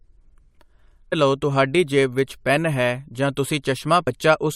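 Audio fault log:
1.12 s and 4.06 s, damaged data in a compressed stream: the decoder hits corrupt frames, loses sync and skips ahead to the next valid header, giving brief glitches, the first just before "ਲਓ ਤੁਹਾਡੀ ਜੇਬ ਵਿੱਚ". Each shows as a thin broadband vertical streak and a waveform discontinuity.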